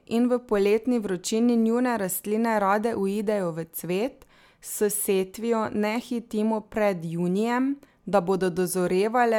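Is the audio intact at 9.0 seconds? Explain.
Yes, the speech at 9.0 seconds is intact, with no audible dropout, click, distortion or other technical fault at that point.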